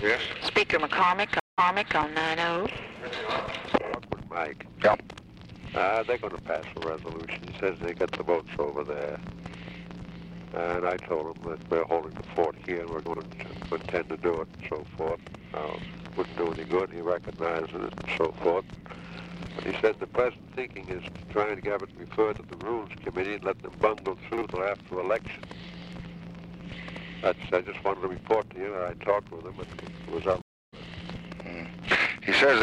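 At 1.40 s a stream reconnect cuts the sound to a 182 ms flat gap, a blank column on the spectrogram. A fresh decoder then resumes 395 ms earlier, repeating material. At 30.42 s another reconnect leaves a 309 ms gap and rejoins about 0.2 s later, skipping ahead.

At 13.06 s, chunks out of order: a 40 ms chunk plays two chunks late, and again at 24.34 s one chunk late. Each gives a brief jumbled stutter, with hard vertical joins and waveform steps.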